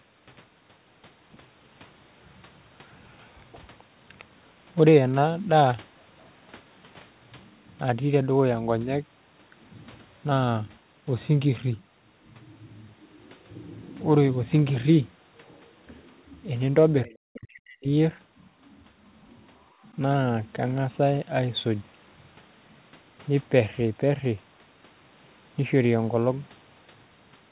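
At 17.04 to 17.1 s the speech dips briefly by about 10 dB, and from 17.3 to 17.91 s it sinks by about 40 dB, nearly vanishing. This is speech suppressed in double talk, likely from an echo canceller turning the talker down while the far end also spoke.

Overlapping the first dip, from 17.06 to 17.16 s, a faint second voice sits about 30 dB under the talker. This is the other side's voice leaking through, likely loudspeaker echo the canceller left in the microphone signal. It differs from background crosstalk in being a fragment that arrives during the first suppression.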